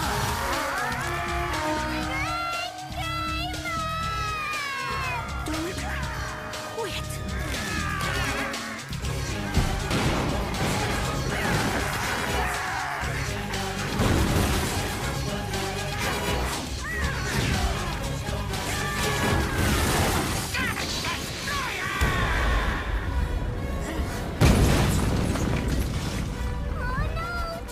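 Nothing in the audio stood out as a technical fault on listening.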